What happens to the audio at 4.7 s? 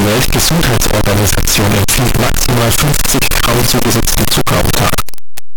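At 4.7 s the speech is buried in very loud, harsh distortion, and this runs through the whole clip. Quiet moments blast as loud as the rest. The likely cause is signed and unsigned mixed up on the 8-bit samples, flipping the top bit so every zero crossing leaps across the full range.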